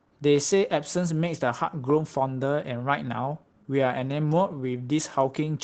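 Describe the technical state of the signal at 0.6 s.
At 0.6 s you're inside a run of repeated timing corrections from 0.36 to 5.46 s. The receiver keeps repeating tiny slices, so the sound plays at about 95% speed and picks up slight hiccups. That comes from clock drift between sender and receiver: the sender's clock runs roughly 5% slow, so the jitter buffer keeps draining and stretches things by around a third of a second overall.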